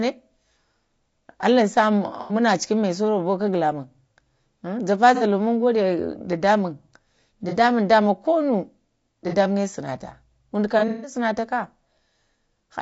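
It's a speech clip with a rough, grainy quality throughout, noise sitting between the harmonics and a thin, synthetic top end. That's likely low-delay AAC compression, the AAC-ELD kind used for video calls, at around 32 kbps. On top of that there's AAC frame loss with concealment: the decoder patches gaps from the last good spectrum, giving smeared, noisy blips at 2.21–2.35 s (90 ms), 5.15–5.23 s (60 ms), 7.49–7.54 s right before "da ma", and 9.29–9.34 s. A worse stretch hits at 10.79–11.15 s, with 180 ms lost across 240 ms and the longest gap about 150 ms.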